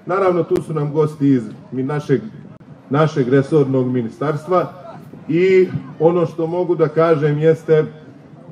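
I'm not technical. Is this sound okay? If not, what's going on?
No. The sound cuts out abruptly twice: a very brief hole at 0.56 s and a longer one, about three times as long, from 2.57 to 2.60 s. Each is a sudden drop to silence with sharp edges, like a tiny skip. This is a gap between stream segments. The audio arrives in 2-second pieces, and where two pieces don't line up in time, the player fills the space with silence. Nothing is missing. The playback just pauses briefly before continuing.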